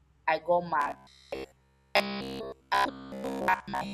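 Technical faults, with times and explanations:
0.8 to 3.93 s, robotic sound from repeated short buffers: the speech turns into a stiff metallic buzz fixed near 66.8 Hz, likely from a 15 ms chunk being replayed while most incoming audio is dropped. Unlike comb-filter phasing, the buzz follows the speech only roughly.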